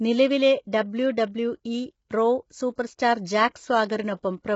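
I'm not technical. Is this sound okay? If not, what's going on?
No. From start to finish the voice sounds rough and grainy, with hiss between the tones and a dull, muffled top end where nothing above about 7.7 kHz comes through. This is likely low-delay AAC compression, the kind video calls use. It squeezes the audio in very short slices to keep the delay small, which captures the voice's pitch poorly, and here it was squeezed hard, so the detail breaks up.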